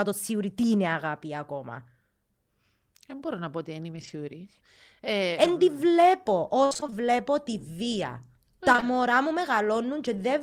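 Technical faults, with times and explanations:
3.91–6.94 s, scattered short gaps: about seven brief packet dropouts, the longest around 50 ms, are patched by extending the preceding sound, so the speech picks up small ticks and smears. A spectrogram shows thin smeared columns where harmonics freeze, and the waveform shows short repeated stretches.
8.72–8.84 s, repeated packet loss (robotic sound): three gaps in quick succession, the longest 19 ms, leave about 53 ms of this 114 ms stretch concealed, nearly half. Each patch repeats the last sound, so the result is choppy, with pieces missing. A spectrogram shows striped, frozen harmonics, and the waveform shows repeated cycles.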